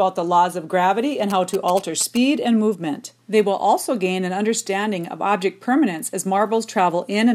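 A nearby 2G phone's GSM signalling bursts were rectified by the audio circuitry from 1.30 to 2.17 s, producing a galloping dit-dit-dit of short 217 Hz buzzes roughly 10 dB below the sound.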